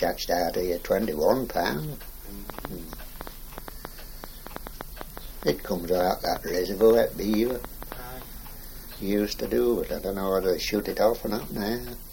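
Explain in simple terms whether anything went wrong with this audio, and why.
A train of clicks runs from 2.50 to 7.93 s: about thirty uneven pops, near five a second. Likely cause: interference, or a faulty connection or power supply.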